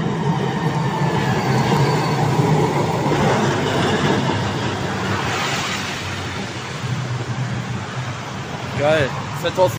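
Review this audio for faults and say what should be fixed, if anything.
There is one overlap between stream segments, at 1.77 s. Two segments claim the same stretch of time, and the player trims the shared part. That sound was never actually duplicated, so about 5 ms of real audio is lost. The waveform jumps across the gap, and the ear catches a tiny skip. The segments are about 2 s long. Fix it by making each segment's timestamps start exactly where the previous segment ends.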